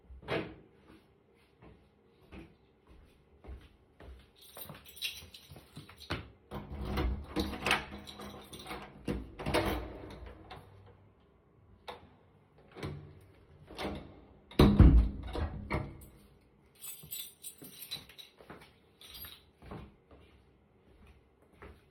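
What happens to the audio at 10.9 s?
Nothing goes wrong at 10.9 s; the audio plays through that moment intact, with no dropout, click or distortion.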